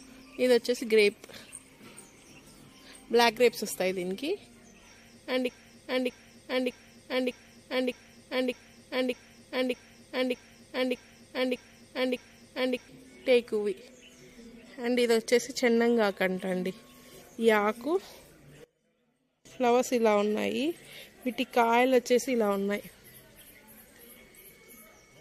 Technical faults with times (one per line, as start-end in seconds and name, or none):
5.49-12.88 broken-record loop
18.64-19.45 one channel inverted